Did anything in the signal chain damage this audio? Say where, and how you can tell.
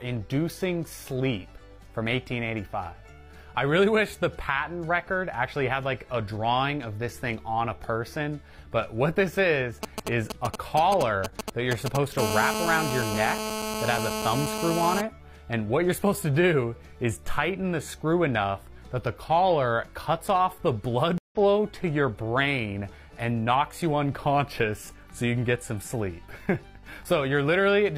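Yes. From 9.83 to 11.97 s, GSM signalling bursts reach the analogue wiring: a nearby 2G phone's short radio bursts are rectified into a galloping run of ticks and brief 217 Hz buzzes, only a few dB below the signal. A spectrogram shows clustered vertical stripes.

From 12.18 to 15.01 s, GSM phone buzz takes over: the phone, now in a call, transmits continuously at 217 bursts per second, giving a hard, raspy buzz about 4 dB below the signal. A spectrogram shows a steady comb of horizontal lines at 217 Hz multiples.

At 21.18 to 21.36 s, a stream reconnect on the network side causes a 128 ms silence. The audio then resumes roughly a tenth of a second further on under a fresh decoder. A waveform shows a flat gap, a discontinuity and a brief fade-in.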